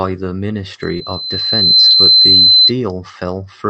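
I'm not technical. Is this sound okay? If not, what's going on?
No. From 0.81 to 2.72 s there is loudspeaker feedback squeal: the microphone picked up the speaker it was feeding, and the sound kept looping and growing at one pitch. You hear a high, piercing 4.1 kHz whistle that swells over about a second before it stops.

There is also short concealed packet loss, twice: at 0.97 to 1.02 s (about 20 ms missing) and at 1.90 to 1.96 s (about 40 ms missing). Bits of the call didn't arrive in time, so the receiver guessed to fill the gaps, leaving a brief smear or wobble in the speech.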